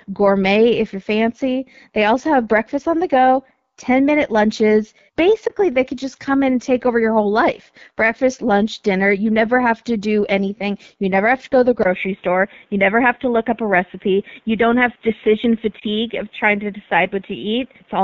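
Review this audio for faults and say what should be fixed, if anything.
Throughout the clip the sound is rough and raspy, as the AMR wideband (HD Voice) codec gives at its lowest rates; the damage fits about 8.85 kbit/s.

At 5.47 to 5.54 s, between "minute lunches" and "they could just come", and again at 15.79 to 15.84 s, there is a brief dip or warble. These are lost AMR speech frames: the decoder repeated its last settings with falling gain for about 20 ms each time.

From 11.83 s, after "to go to the", a 20 ms silence gives way to a duller, boxier sound with nothing above 3.8 kHz and a faint new noise floor, while the level stays about the same. The input was likely switched to a poorer device.

To prevent these, use a higher AMR-WB rate on a cleaner radio link, and lock the recording input so it cannot change mid-call.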